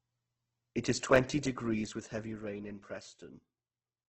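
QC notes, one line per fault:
Throughout: Opus compression. The speech sounds grainy and rough, with a noisy texture rather than the swirling, hollow holes of MP3-style damage. Nothing is present above 8.2 kHz, so the top end is shut off. The likely cause is Opus in its music (CELT) mode at a very low rate, around 12 kbps. It has filled starved bands with folded or noise-like content instead of leaving them empty.
1.16 s and 2.35 s: block of digital silence. At each point the signal drops to silence for a few milliseconds, about 1.6 ms and then about 3.7 ms, and returns abruptly with no fade. Because the gaps are so short, each is heard as a single tick or click rather than an audible hole. The hard edges set these apart from a smooth level change. They fit an output buffer that wasn't filled in time.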